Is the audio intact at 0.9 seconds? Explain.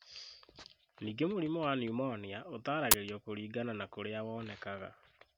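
Yes, the speech at 0.9 seconds plays through cleanly, with no dropout, click, distortion or other fault at that moment.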